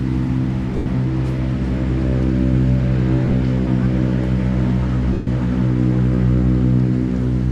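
At 0.77 s the audio breaks into a noisy smear for about 90 ms, which fits nine lost 10 ms frames. These are lost LE Audio frames. The decoder fills each gap by replaying the last spectrum with random phase signs, so the sound loses its tonal clarity. At 3.25 s the losses are scattered over 80 ms, with the longest run around 30 ms, giving brief grainy flickers. At 5.13 s a 140 ms gap smears, then fades toward silence.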